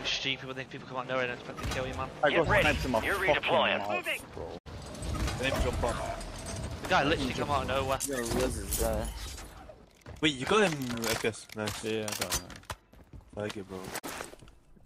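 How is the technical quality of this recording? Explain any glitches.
The recording has two brief digital broadcast dropouts, at 4.57 to 4.68 s and at 13.98 to 14.05 s. The receiver muted when frames failed to decode, fading out over about 20 ms. The gaps are about 64 ms and 32 ms, consistent with losing two frames and then one. That audio is lost, and the sound resumes mid-flow.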